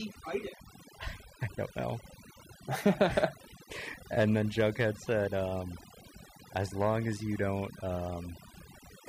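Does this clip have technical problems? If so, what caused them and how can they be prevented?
Yes: overdone noise removal throughout leaves a near-silent background with twinkling specks, seen on a spectrogram as scattered isolated bins. Prevent it by using gentler reduction settings.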